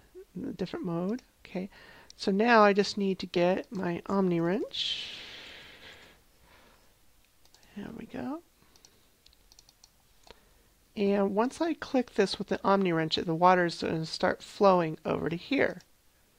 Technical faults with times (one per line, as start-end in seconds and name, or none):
none